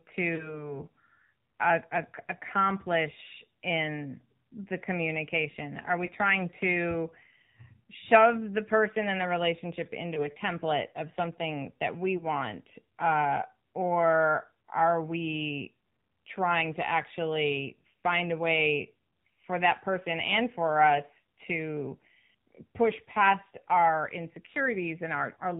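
Buzzy, synthetic speech with nothing above 4 kHz runs through the whole clip. Sibilants are dulled, and any background turns to a swirling warble. This is the sound of the AMR narrowband mobile codec. It samples at 8 kHz and rebuilds the voice from a vocal-tract model fed by a few pulses per subframe. The plainly audible coarseness fits the low 7.4 kbps mode, where too few pulses are left to capture the natural texture. Four brief dropouts, heard as short warbles or dips, occur at 0.36 to 0.68 s, at 6.06 to 6.11 s just before "trying to", at 10.14 to 10.28 s between "person and the relationship" and "template of something that", and at 12.18 to 12.25 s right after "of something that we". Each is consistent with a single lost 20 ms frame, so these are lost AMR speech frames. The decoder filled each gap by repeating the previous pitch and spectral settings at reduced gain, which leaves the voice briefly smeared and rough before it recovers.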